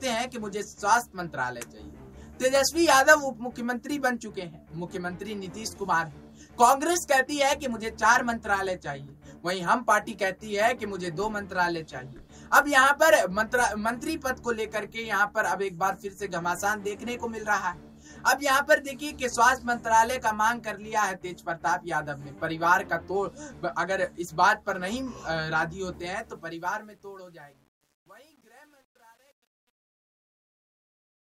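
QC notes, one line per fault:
25.94–31.20 s, truncation distortion on a fade: the closing fade-out, which starts around 26 s and runs to the end at 31.2 s, loses resolution as it drops. From 26.8 s to the end the tail turns gritty. The fade stage keeps too few bits and adds no dither, which fits a 10-bit word length. The low-level waveform collapses into a few coarse square steps, so quiet detail becomes harsh distortion.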